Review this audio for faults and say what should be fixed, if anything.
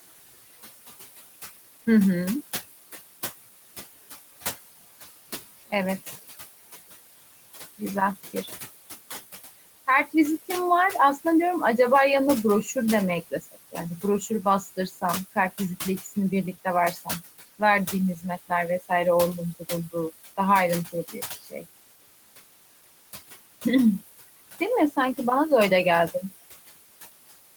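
There are noise suppressor artifacts all the way through. The suppressor pulls the room noise down by about 16 dB in the gaps, so the background pumps, dropping between phrases and swelling back under speech. That room noise sits only about 13 dB below the voice, so the suppressor is working hard. Easing its depth or slowing its gain changes would smooth this out.

There is also speech cut by the noise suppressor at 13.31–15.03 s, 16.53–17.08 s, 17.59–18.91 s, 19.59–19.95 s and 20.92–21.65 s. Within each span, brief quiet bits of speech get mistaken for noise and ducked by about 11 to 18 dB, so endings and soft sounds come out swallowed. A gentler threshold or a better speech detector in the suppressor would keep those intact.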